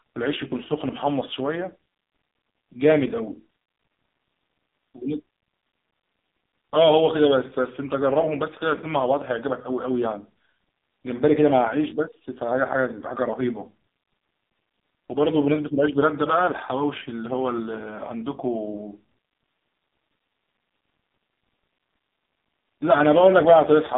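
Throughout the speech, the signal carries the sound of the AMR narrowband mobile codec. Energy stops at about 3.8 kHz, and the line band runs from roughly 200 Hz to 3.7 kHz, so sibilants and breath detail are gone and the low end is thin. The codec damage is heavy: the voice has a buzzy, synthetic edge because the vocal-tract model is driven by very few pulses per subframe. This points to one of AMR-NB's lowest bitrate modes, around 5 kbps.

At 8.77 s there is a repeated buffer. Fresh audio failed to arrive in time, so the playback device looped the last tiny block several times with a hard join at each pass. Because each block is so short, which fits a 5 ms buffer, the repeats are too short to be heard as a stutter. Instead they come across as a brief buzz or click, and a sliver of the original audio is skipped.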